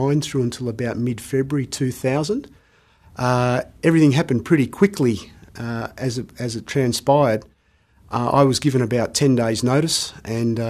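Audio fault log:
No audible faults detected.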